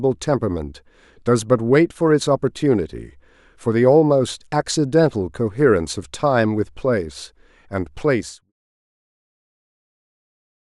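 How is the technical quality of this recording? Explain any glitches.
The technical quality holds up with no glitches to explain, and the speech fades out smoothly from about 8 s to 8.53 s as an intended edit.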